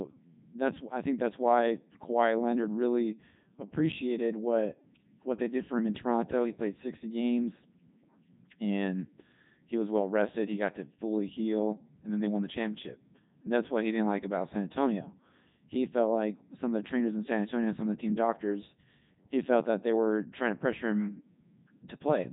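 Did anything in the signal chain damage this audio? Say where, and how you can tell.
Yes, at the codec. Heavy Codec 2 vocoder damage throughout. Speech sounds robotic and buzzy, rebuilt from pitch and envelope. Nothing above 3.8 kHz, which fits 3.2 kbit/s.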